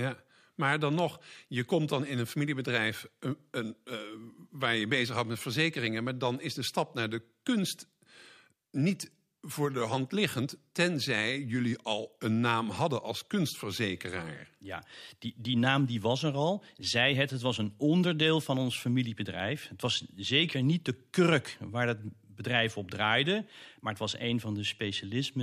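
A voltage spike, likely from a switch or static, hits the chain between "maar dan" and "je komt dan in": a single loud pop, roughly 10 dB above the speech, from 0.99 to 1.01 s.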